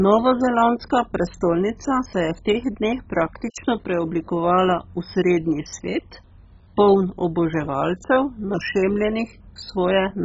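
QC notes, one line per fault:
Throughout, MP2 compression: the speech is dull and carries a heavy gurgling, granular distortion, with no content above 7.5 kHz. This likely comes from MPEG Layer II coding at a very low bitrate, consistent with about 16 kbps. With so few bits spread across its 32 sub-bands, the encoder switches off the upper bands entirely and flickers others on and off, while the surviving bands are coarsely quantised, producing the gritty, watery texture.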